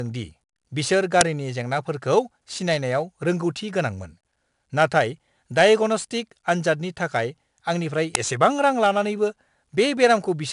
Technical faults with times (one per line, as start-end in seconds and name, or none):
0.00-10.52 4-bit ADPCM compression
1.21 uninitialised buffer
8.15 uninitialised buffer